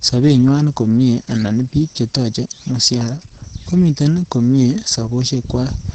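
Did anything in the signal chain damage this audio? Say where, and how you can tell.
Yes, the damage comes from the codec stage: Opus voice compression runs through the whole clip. The encoder used its SILK linear-prediction mode in wideband, and the heavy artefacts point to a bitrate near 10 kbps. Nothing remains above about 8.9 kHz, so the speech sounds muffled. The prediction residual was coded coarsely in 20 ms frames, which leaves the speech hoarse and slightly robotic.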